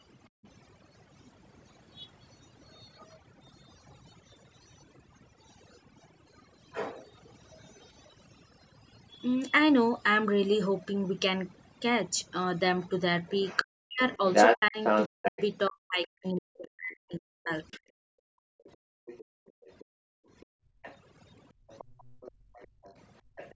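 Throughout the speech, the background sits at near silence flecked with twinkling specks. This is overdone noise removal: a noise reducer set too hard has pushed individual frequency bands down whenever they came close to its noise estimate, taking quieter parts of the voice with them. Nothing reaches above 8 kHz, which fits the call's normal microphone processing.

From 0.3 to 0.45 s the room sound dips sharply, by about 40 dB, for roughly 150 ms before returning. This is the background being gated by the echo canceller, which turned the microphone down hard while its loudspeaker was playing and then let go.

From 13.59 to 15.43 s a second voice comes through, slightly louder than the talker. This is most likely the other side's voice leaking through: their speech, played on the talker's loudspeaker, was not fully removed from the microphone signal.

Overlapping this, from 13.64 to 18.02 s, the talker's voice dips deeply and breaks up, for about three seconds in total. 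Both sides were probably talking at once, so this is speech suppressed in double talk. The canceller could not tell the talker from the loudspeaker echo and turned both down.

From 17.72 s to the end at 23.55 s, a faint second voice, likely the other side's voice leaking through again, comes through far below the talker.

From 18.3 to 23.36 s the background is gated by the echo canceller once more, dropping out by up to about 40 dB for around three seconds in all.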